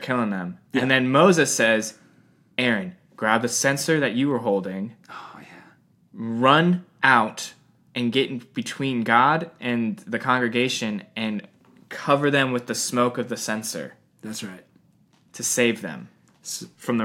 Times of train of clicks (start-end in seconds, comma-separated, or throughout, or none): none